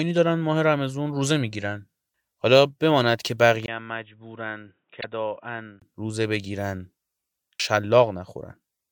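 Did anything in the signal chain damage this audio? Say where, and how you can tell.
Yes. At the input stage, from 3.66 to 5.82 s the speech turns dull and boxy. A 20 ms silence opens the change, the level drops about 10 dB, and a new noise floor sits roughly 45 dB down. This is likely the input switching to a poorer device. A spectrogram shows a hard ceiling at 3.8 kHz and a thin vertical gap at the switch.

Inside that stretch, from 4.97 to 5.04 s, a short disturbance breaks in. This is damaged data in a compressed stream, at the codec or storage stage. The decoder misread the corrupted frames and resynchronised at the next header. The waveform shows an abrupt discontinuity.

At 7.60 s about 300 ms of speech vanishes, and the two sides are butted together without silence. This is audio missing between chunks at the driver or buffer stage, likely a recorder losing material as it closes one 3-second chunk and opens the next. 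The waveform shows a hard splice where the envelope jumps.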